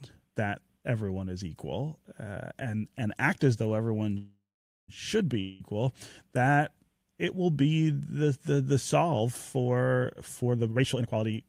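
At 4.17 s, right after "act as though everyone", the speech stops and the last sound hangs on as a buzz that fades to about 0.47 s of silence before the speech picks up exactly where it left off at 4.90 s. This call audio freeze was likely caused by delayed packets emptying the jitter buffer, so nothing is lost but about 0.71 s of extra delay is added.

From 5.40 to 5.74 s, between "as though everyone should" and "that it will be", there is a short fading buzz lasting about 0.2 s and then the speech resumes further on, with about 0.2 s of it gone. This long network dropout likely comes from audio that never arrived in time to be played.

From 10.03 to 11.31 s the speech runs hurried, at about 145% speed with its pitch unchanged. This jitter buffer speed-up comes from the receiver trimming many short pitch-period pieces to shed excess buffered delay, removing roughly half a second in total.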